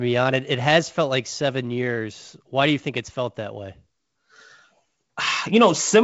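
Speech carried over G.722 wideband telephone coding, with content ending near 7.7 kHz as that path would give, and no technical fault present.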